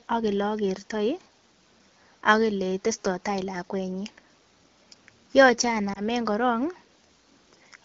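At 5.93 to 6.01 s there is a lost AMR speech frame: a single 20 ms frame failed its checksum after radio errors, so the decoder filled the gap by repeating the previous frame's pitch and vocal tract parameters at reduced gain. The result is a short dip or warble in the speech lasting well under a tenth of a second, with the AMR wideband (HD Voice) codec's 12.65 kbit/s rendering briefly sounding weak or rough as it recovers.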